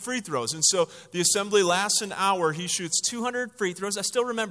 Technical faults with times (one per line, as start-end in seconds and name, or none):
0.00-2.92 wrong sample rate